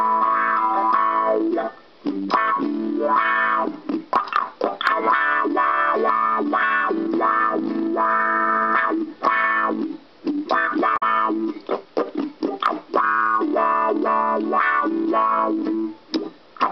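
At 10.93 to 11.03 s, damaged data in the compressed stream makes the decoder misread frames and lose sync, giving a brief glitch that shows as a garbled spectrogram block.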